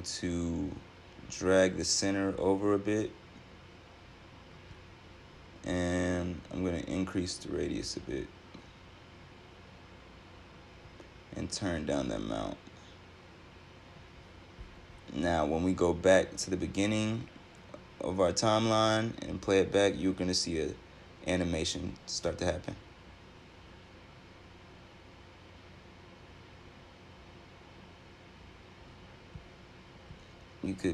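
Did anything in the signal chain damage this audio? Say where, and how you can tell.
No, nothing in the signal chain damaged this audio.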